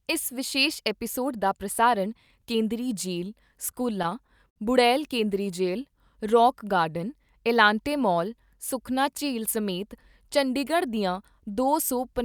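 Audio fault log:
3.71–4.58 s, repeated stalls (stutter): packets reached the receiver later or more slowly than playback consumed them, so the jitter buffer kept running dry and the receiver bridged each stall by continuing the last sound. Between "ਦਾ ਪ੍ਰਸਾਰਣ ਕੇਂਦਰੀ ਜੇਲ੍ਹ" and "ਬੁੜੈਲ ਕੇਂਦਰੀ ਜੇਲ੍ਹ ਰੌਕ" the speech catches five times, adding about 105 ms of stretched sound. The longest stall is 60 ms. Nothing is lost, but the passage drags and stutters.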